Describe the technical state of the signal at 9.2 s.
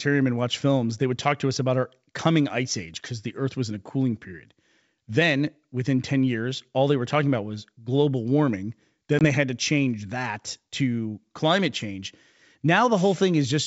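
At 9.2 s there is packet loss on an ADPCM call, spanning about 9.19 to 9.26 s. Around 20 ms of audio, roughly a couple of packets, drops out and is filled with silence. The hole has hard edges. The ADPCM decoder's predictor and step size then no longer match the sender's. So the sound resumes with some distortion before it settles.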